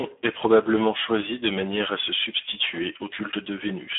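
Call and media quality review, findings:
Speex codec at a low quality setting, throughout: too few bits for the excitation, so speech turns hoarse and noisy. Sound confined to roughly 200 Hz to 3.6 kHz, nothing above 3.8 kHz; damage fits an 8 kbps narrowband mode.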